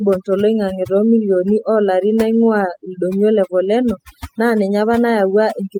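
Speech runs under overdone noise removal from start to finish. A noise reducer set far too aggressively pulls individual frequency bands down to nothing whenever they sit close to its noise estimate, and the quieter components of the voice fall below that threshold along with the noise. The result is a background that drops and breaks up into sparkling, twinkling specks.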